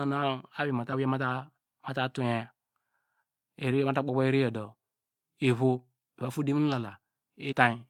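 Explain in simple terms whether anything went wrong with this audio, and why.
Two quick glitches break into the speech, one from about 0.89 to 0.94 s and another from about 7.48 to 7.53 s, each lasting roughly a twentieth of a second. Both come from damaged data in a compressed stream: a small chunk of the compressed file got corrupted, so the decoder couldn't make sense of it, lost its place, and had to hunt for the next clean frame. That stumble comes out as a brief chirp or blip.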